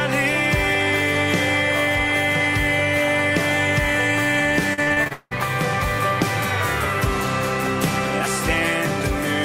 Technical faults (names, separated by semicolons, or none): repeated packet loss (robotic sound)